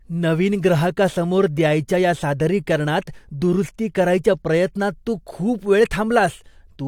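No technical faults are audible.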